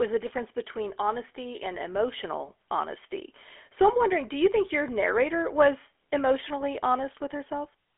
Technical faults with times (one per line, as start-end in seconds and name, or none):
0.00-7.98 GSM full-rate codec